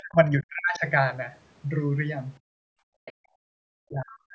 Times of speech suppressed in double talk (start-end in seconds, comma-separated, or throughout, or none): 0.00-0.86, 3.44-4.34